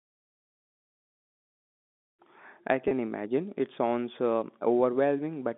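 A short speech recording carried over a telephone-band line, with G.711 coding holding the audio to roughly 200 Hz to 3.6 kHz, contains one instance of packet loss with pitch repetition from 2.88 to 2.91 s. About 30 ms of audio went missing, which fits a single lost packet. The receiver filled the gap by replaying the last pitch period, so the sound briefly holds on one slightly buzzy, sustained tone before normal speech resumes.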